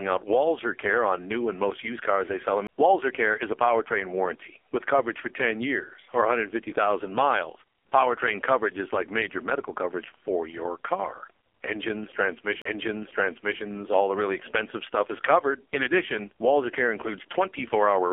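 AMR narrowband mobile codec damage runs through the whole speech recording: nothing above 3.4 kHz survives, and the heavy buzzy, synthetic quality points to a low bitrate mode, around 5 kbps. CD skips occur at 2.67 s and 12.62 to 12.65 s: the laser jumped to another turn of the spiral, muting briefly, for roughly 15 ms and 40 ms, then resuming elsewhere in the recording.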